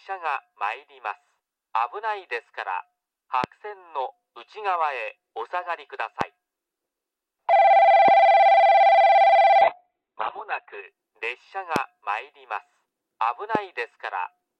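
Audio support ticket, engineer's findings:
Loud pops at 3.44, 6.21, 8.08, 11.76 and 13.55 s: single sharp pulses, about 15 dB above the programme, each about 20 ms. Sound continues under them, unlike dropouts. Likely a voltage step from connector, switch or static.

Call bitrate drop, 9.62 to 10.93 s: coarse, watery, muffled sound, top end gone above 4 kHz for about 1.2 s. This fits the Opus encoder falling from roughly 128 to 7 kbps. It is a sustained codec degradation, not a transient.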